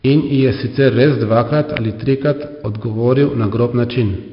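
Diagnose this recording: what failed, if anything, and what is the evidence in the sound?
Gritty hiss on every loud syllable, nothing above 5.3 kHz: heavy 4-bit ADPCM compression in the codec, its coarse prediction steps tracking the level.

A single sharp snap at 1.77 s sits on top of the speech, an electrical switching spike, likely a nearby switch arcing into the analogue wiring.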